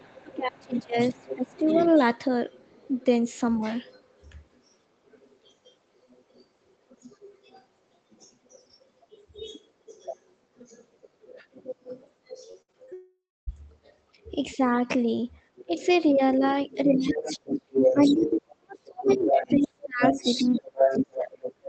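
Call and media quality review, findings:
Other side's voice leaking through: far-end voice audible under near-end speech 0–14.6 s at about -20 dB, 15.56–18.30 s at roughly equal level, 19.05–21.68 s at about -5 dB. Likely residual echo the canceller failed to remove.

Speech suppressed in double talk: near-end ducked 0.23–1.75 s (about 25 dB) and 16.39–21.39 s (about 30 dB). Brief dips at 11.02–11.06, 14.55–14.59 and 15.67–15.75 s. Likely echo canceller attenuating both talkers during overlap.

Repeated packet loss (robotic sound): choppy speech 12.51–12.93 s. Five short holes patched by extending the previous sound; longest gap 63 ms, about a third of the span concealed.

Long network dropout: 12.93–13.49 s, fading buzz then near silence for the last quarter-second. Audio resumes with that segment missing. Likely network outage with receiver concealment running out.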